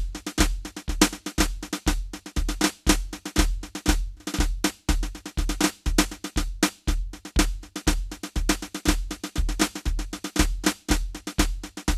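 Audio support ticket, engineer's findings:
Music clip: no faults found on listening.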